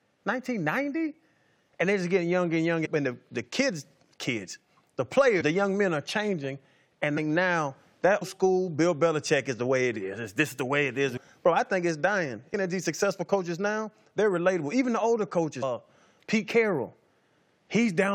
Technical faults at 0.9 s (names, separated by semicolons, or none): none